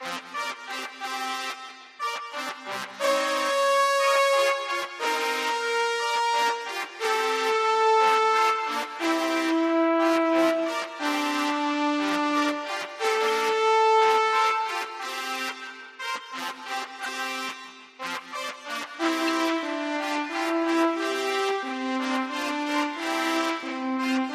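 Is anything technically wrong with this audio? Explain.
Yes. Five corrupt frames were decoded and played, at 13.27 to 13.29 s, 15.34 s, 17.03 to 17.08 s and 19.27 to 19.30 s. Flipped bits in a compressed frame made the decoder misread gains and spectral codes, so energy was rebuilt at the wrong frequencies for roughly one frame each, about two frames at 17.03 s. Each error comes out as a short chirp or burst of noise, peaking near -20 dBFS for the first two and nearer -15 dBFS for the last two.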